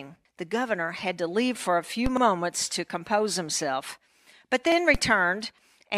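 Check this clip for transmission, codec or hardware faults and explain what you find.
Two kinds of fault occur in this speech recording, each appearing twice.

A DC step at 2.06 s and again at 4.95 s jumps the waveform's zero line, then decays back through a 20 Hz high-pass. It makes a dull low thump rather than a repeat.

Overlapping chunks at 2.17–2.22 s and 4.72–4.77 s replay about 48 ms of speech where 2.5-second blocks join. Unlike the thumps, this stutter repeats audible content at a regular spacing.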